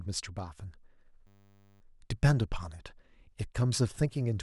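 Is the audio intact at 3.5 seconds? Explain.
Yes, at 3.5 seconds the speech plays through intact, with no dropout, click, distortion or other fault to be heard at that moment.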